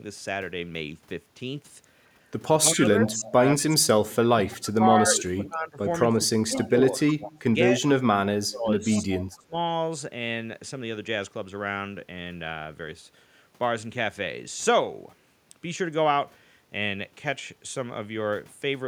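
From 2.58 to 7.87 s the speech is ducked by up to about 25 dB in patches, likely speech suppressed in double talk as the echo canceller could not separate its own talker from the loudspeaker echo and turned both down; at 6.55 s an echo leak adds a faint copy about 25 dB down, 225 ms late, likely residual loudspeaker echo. From 8.33 to 9.55 s the same suppression cuts deeper, about 30 dB, and from 8.91 to 9.20 s a second echo leak returns the speech 225 ms late at about 20 dB below the original.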